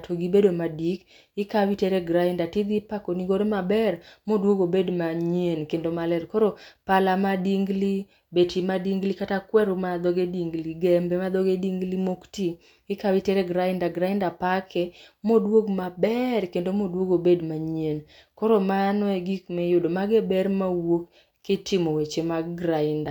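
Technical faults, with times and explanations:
No technical faults detected.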